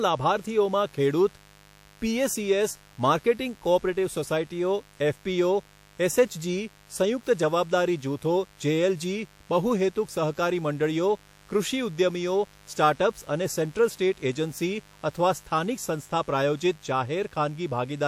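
A steady, raspy buzz runs under the speech from start to finish, sitting well below it, roughly 30 dB down. This is mains buzz: sharp switching spikes from 50 Hz mains leak in twice per cycle, spraying harmonics up into several kilohertz.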